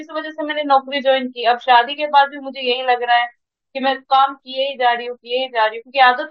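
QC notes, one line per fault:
Nothing stood out on listening to the speech here.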